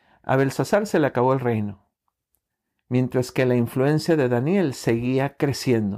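Hard clipping roughens the speech from 0.31 to 1.32 s, driven about 4 dB past the limit. Peaks are sliced flat. The flattened tops spray high harmonics, heard as crackly fuzz on loud syllables. It returns from 2.96 to 4.13 s, about 3 dB over.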